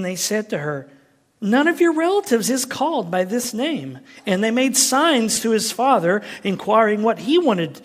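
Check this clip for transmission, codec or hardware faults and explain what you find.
Two brief playback faults occur in the speech, both repeated buffers, at 3.44 s and 5.36 s. When fresh audio missed its deadline, the device replayed its last block of about 5.8 ms, which fits a 256-sample buffer. At 3.44 s the block plays once extra, and at 5.36 s twice. Each repeat joins hard, and at this block size it sounds like a click or brief buzz rather than a stutter. Roughly 5 ms and 10 ms of audio are lost.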